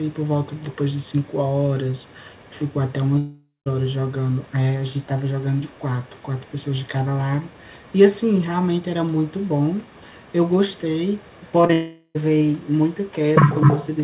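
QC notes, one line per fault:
0.56–1.38, 1.95–2.71, 4.43–4.53, 5.58–7.09, 7.46–7.96, 9.25–11.52 s, other side's voice leaking through: a faint second voice, roughly 35 to 40 dB below the talker, likely loudspeaker echo the canceller missed.
12.58 s to the end, other side's voice leaking through: the second voice returns louder than the talker, likely echo passing almost untouched through the canceller.
3.18–3.68 and 11.73–12.17 s, long network dropout: about half a second of audio is lost; a fading continuation bridges the gap, ending in brief silence, likely from dropped packets.
11.62–11.65 and 11.67–11.71 s, short concealed packet loss: two 20 ms holes are patched by extending the preceding sound, heard as a quick smear just before the second dropout.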